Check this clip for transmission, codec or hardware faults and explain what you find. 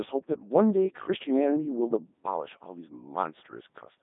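A codec fault runs through the whole clip. The speech was carried by a Codec 2 vocoder, which sends only pitch, voicing, energy and spectral shape and rebuilds the voice from sine waves. The result is heavily robotic, buzzy speech confined to about 200 Hz to 3.7 kHz, with nothing above 3.8 kHz, which fits the 3.2 kbit/s mode.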